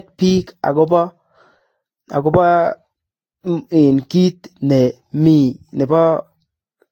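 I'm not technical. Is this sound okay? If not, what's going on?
No. The speech sounds swirly, smeared and a bit hollow the whole way through, and the starts of sounds are blurred. That's generation loss: it was likely squashed by a lossy format and resaved around seven times, each pass adding fresh damage.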